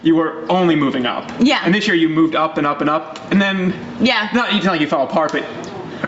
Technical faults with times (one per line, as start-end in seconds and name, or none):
0.00-6.07 gain pumping